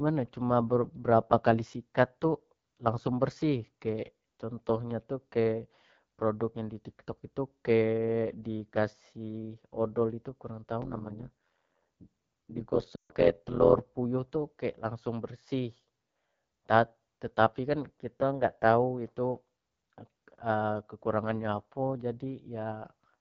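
Throughout, the speech carries the rough, raspy texture of the AMR wideband (HD Voice) codec at a low rate, consistent with 8.85 kbit/s; a spectrogram shows detail ending near 6.4 kHz and smeared noise above.

From 10.82 to 13.79 s, overlap-add ripple adds a harsh metallic buzz near 100 Hz, as mismatched frame overlaps swing the level by about 60 dB; the waveform shows a dense comb of envelope notches.

Within that stretch, from 12.96 to 13.13 s, lost AMR speech frames leave 140 ms where the decoder reuses the last good settings and drops to near silence within two frames, fitting a run of about seven frames; the spectrogram shows harmonics that vanish almost at once.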